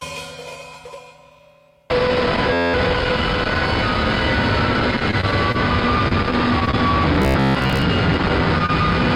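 From 2.53 to 2.74 s, a system hang loop: the system or its audio driver froze while the sound hardware kept replaying the same stretch of its ring buffer. A segment 11.61 ms long, which fits a 512-sample buffer, repeats 18 times, so the music gives way to a steady buzz at about 86.1 Hz. About a fifth of a second of the real music is lost beneath it.

From 4.99 to 5.56 s and again from 6.08 to 6.75 s, there is repeated packet loss with a robotic sound. Packets failed to arrive on time again and again. The receiver bridged each hole by extending the last sound before it. There are five gaps in each stretch, the longest 23 ms in the first and 25 ms in the second. Concealment fills 87 ms and 85 ms, and 40 ms and 60 ms of real audio go missing. The music turns choppy, with small pieces dropped out.

From 7.22 to 7.83 s, there is robotic sound from repeated short buffers. New audio was arriving too seldom, and the gaps were filled by replaying the latest short buffer while the real signal was skipped. 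The repeats lock a rigid buzz onto the music at about 66.8 Hz, and most of this stretch is repeated material. The music's contour comes through only roughly beneath the metallic drone. This is the likely cause.

From 8.66 to 8.70 s, there is a short concealed packet loss. About 20 ms of audio never reached the decoder in time, and the receiver synthesised 24 ms as a continuation of the preceding sound before blending back into the real signal. It is heard as a brief smear in the music.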